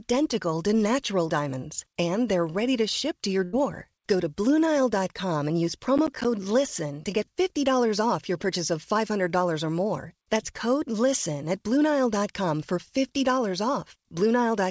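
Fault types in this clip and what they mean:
burst of packet loss: Right after "ship to your", at 3.44 to 3.56 s, roughly 90 ms of the call audio failed to arrive, and the receiver filled about 86 ms of it by stretching the last sound and fading it out before the speech jumps ahead. On a spectrogram the last sound's pattern is held and dims, then comes a hard restart. The waveform shows the continued sound shrinking, followed by an abrupt change.
processor overload crackle: After "and use", from 5.98 to 6.25 s, the processor repeatedly missed its deadlines. This fits buffers of around 10 ms, with about 7 of them left as silence, so the speech is chopped into a brief gritty tearing. The waveform shows short flat dropouts with sharp edges. On the spectrogram each edge is a thin vertical broadband line that stops at the 8 kHz ceiling of the G.722 call path.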